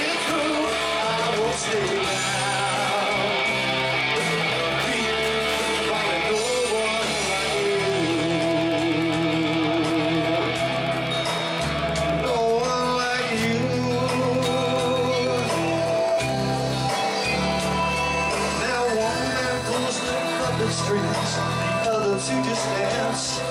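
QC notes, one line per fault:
Throughout: Wi-Fi interference, a steady ticking about ten times a second, following a 102.4 ms beacon period, sitting roughly 25 dB below the signal. A nearby Wi-Fi radio's periodic beacon transmissions are being rectified in the audio circuit and demodulated into audible clicks.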